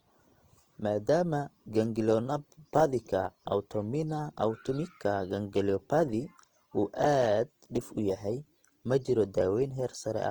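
Speech runs under Opus compression from start to finish, and a low-bitrate encode is the likely cause of the damage: the coder appears to sit in its CELT music mode at a rate that fits around 24 kbps. Short of bits, it fills bands by folding lower ones or with noise instead of leaving gaps, so the speech comes across plainly rough, grainy and noisy rather than swirly, while the bandwidth stays full, reaching about 20.2 kHz.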